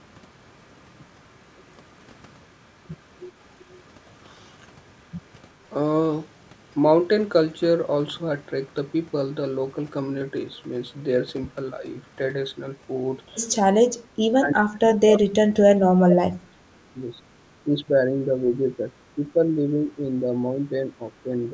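Echo leak at 3.59 to 3.82 s and 13.84 to 13.88 s: a very faint copy of the speech returns roughly 0.38 and 0.41 s late, likely from far-end loudspeaker echo that the canceller did not fully remove.

Speech suppressed in double talk from 13.92 to 17.12 s: the near talker sinks by up to about 30 dB, likely because the canceller mistook overlapping speech for echo. Milder dips of about 5 dB follow at 17.64 to 18.95, 19.15 to 20.34, 20.56 to 21.02 and 21.23 to 21.53 s.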